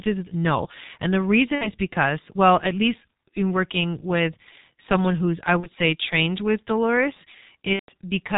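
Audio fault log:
throughout G.723.1 codec: The speech is muffled and hoarse, with smeared consonants and nothing above 4 kHz. The heavy damage fits the 6.3 kbit/s mode, whose 30 ms frames and slowly updated voice model cannot follow rapid changes in the voice.
1.55–1.72 s, 5.60–5.69 s, 7.73–7.90 s VoIP packet loss concealed by the speech codec: The speech smears into a fading buzzy tone or coloured noise that stays weak or distorted afterwards, just before "because well at least" and between "with someone who's I" and "say trained with". The decoder repeated its last pitch and filter across gaps of about 60, 30 and 150 ms.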